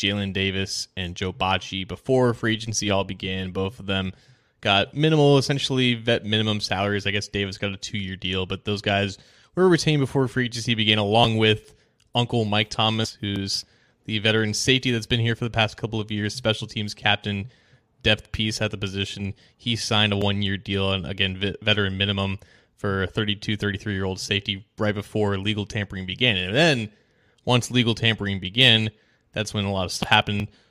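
From 2.54 s to 3.65 s the speech picks up an overlap-add ripple. The signal was split into windowed frames and rebuilt with an overlap whose gains don't sum flat, so the level dips and swells by about 6 dB once per frame, at around 100 Hz. It sounds like a metallic buzz with extra tones around the speech. Unlike mains hum, it adds no steady tone of its own. It is a pulsing of the speech's own level, locked to the frame rate.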